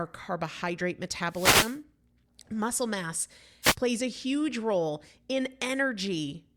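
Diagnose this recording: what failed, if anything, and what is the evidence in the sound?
The failure is in the analogue stage, at the radio link of a wireless microphone. The speech shows two wireless microphone noise hits. The first runs from 1.29 to 1.80 s, a swish of static about half a second long. The second is shorter, from 3.62 to 3.75 s, and ends just before "plays a huge role". In each, the FM carrier fades as reflected paths cancel it. Receiver hiss then rises.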